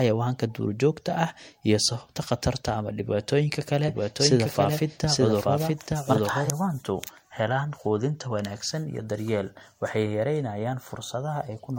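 From the start to the end of the speech, the sound is swirly, smeared and hollow, with consonant attacks blurred and nothing above 16.6 kHz. That is more damage than one pass at the bitrate the band limit suggests, around 64 kbit/s MP3, would cause. It is likely generation loss, from the audio being decoded and re-encoded about three times, each pass adding its own quantisation noise and spectral holes on a shifted frame grid.

From 3.88 s to 6.50 s, a second full-band copy of the speech runs about a second behind the first and at roughly the same level. It cuts in and out abruptly. This is likely a doubled audio track, where the same signal was mixed in twice out of step. Unlike an echo or room reflection, the copy has no decay, no tail and no added room colour.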